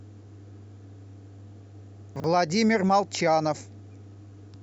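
From 2.16 to 2.24 s the speech briefly jumbles, with a garbled stutter. This is chunks out of order: a 40 ms block arrived one chunk late and plays after its successor, so nothing is lost, but three hard joins appear.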